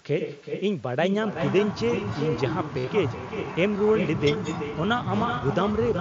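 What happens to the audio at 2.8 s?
Between 2.79 and 2.87 s there is concealed Bluetooth headset packet loss. About 60 ms of headset audio went missing over roughly 75 ms, with a longest unbroken gap of 45 ms. The receiver covered each gap by repeating the best-matching recent stretch of waveform, so the gaps sound like a held buzzy tone at full level, with a warble where real audio resumes. On a waveform this looks like a short, evenly repeating cycle at steady amplitude. On a spectrogram it looks like frozen, smeared harmonics.

Under this, the echo with no canceller runs throughout. A quieter, thinner copy of the talker follows about 7 dB down, roughly 0.4 s later. On a spectrogram it shows as a weaker duplicate of the pattern, shifted later in time.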